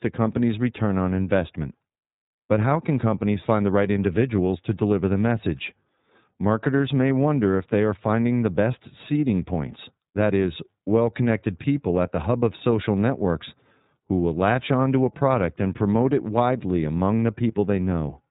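Throughout, iLBC codec coding cuts everything above 3.8 kHz, a flat ceiling on a spectrogram, and codes 30 ms frames independently, leaving the speech audibly rough and synthetic, consistent with 13.33 kbps.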